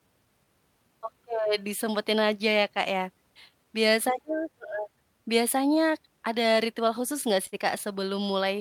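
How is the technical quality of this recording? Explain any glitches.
The recording has audible timing faults from a clock mismatch, plus one brief stall near the end.

Clock drift between sender and receiver runs through the whole clip. The sender's clock runs slow, by about 4 percent, so audio arrives slightly too slowly and the receiver's jitter buffer keeps draining. It has to keep stretching what it has to avoid running dry. On a waveform this shows as speech that feels slightly drawn out. A spectrogram shows no single event, just a steady sluggishness.

Repeated timing corrections are how that drift is absorbed, from 0.00 s to 8.57 s. The receiver repeatedly duplicates short pieces of audio, all in the same direction and at uneven spacing, so playback runs at about 96 percent of normal speed and gains roughly a third of a second overall. Each insertion is small, heard as a faint hiccup or unsteady rhythm in the speech. 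On a spectrogram, short segments appear doubled, with tiny seams in the harmonic traces.

A short stall from a late packet occurs from 7.47 s to 7.55 s. A packet missed its playout deadline, the already-draining buffer emptied, and the receiver held the last sound for 52 ms until the packet arrived. Nothing was lost, and playback resumed from the same point. A held sound like this can carry a slight buzz or dip in level. On a spectrogram it shows as a flat, frozen band of frequencies. On a waveform it shows as a repeated, evenly periodic patch before normal motion returns.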